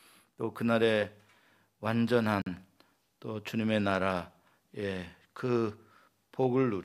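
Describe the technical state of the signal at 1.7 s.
At 1.7 s the speech signal is intact, with no audible fault at that moment.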